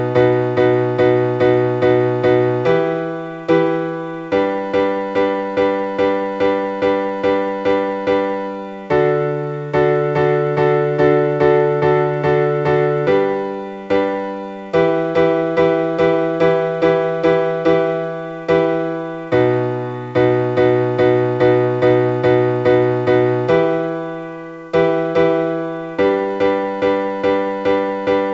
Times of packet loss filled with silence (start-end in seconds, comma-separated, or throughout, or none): none